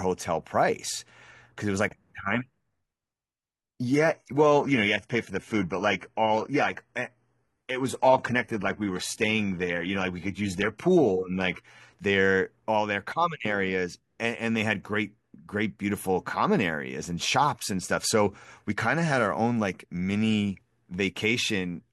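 From 3.93 s to 11.93 s the speech suddenly degrades, with smeary artefacts, then snaps back with no gap. That's an adaptive stream at a lower bitrate, sounding like a drop to a low-rate HE-AAC rendition after the connection slowed.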